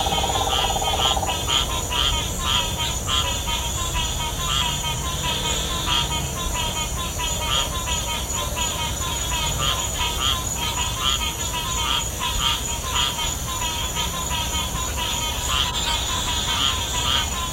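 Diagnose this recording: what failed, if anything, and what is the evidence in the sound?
Corrupt frames decoded at 2.82–2.91 s, 10.67–10.72 s, 12.81–12.90 s and 15.64–15.92 s: codec-stage damage. Each burst is a short chirp or noise blip, loud at about -10 to -15 dBFS. The last burst spans several frames. Flipped bits made the decoder rebuild energy at wrong frequencies.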